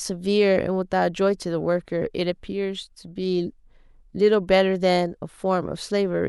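Nothing in this speech recording gives any sign of a technical fault anywhere along the way.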